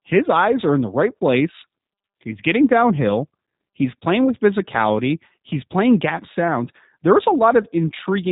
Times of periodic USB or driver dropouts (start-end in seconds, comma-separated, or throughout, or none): none